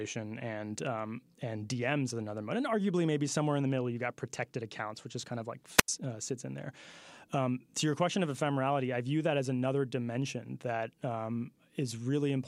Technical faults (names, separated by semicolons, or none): wireless microphone squelch dropout